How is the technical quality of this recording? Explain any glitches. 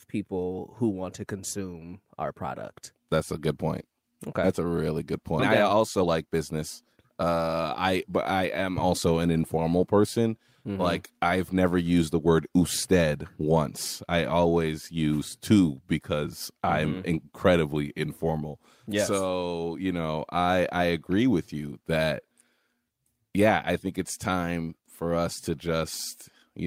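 Two glitches stand out, both close together early in the recording.

At 5.39 s there is a skip ahead: a stretch of roughly 0.7 s of speech is missing, and playback jumps straight from before the gap to after it with no silence filling the hole. The audio was dropped while later audio was already queued, so the two sides are butted together. Unlike a dropout, there is no quiet gap or muted stretch. You hear an abrupt join where part of the utterance simply vanishes.

From 5.49 s to about 8.1 s comes a jitter buffer speed-up. After the jump, the receiver was still holding more audio than it wanted, so it trimmed short pitch-period-sized pieces many times in a row, cutting around 300 ms in total. Speech runs at about 110% of normal rate and sounds hurried. The pitch stays the same, which separates this from a simple playback-rate change, where speech would also sound higher.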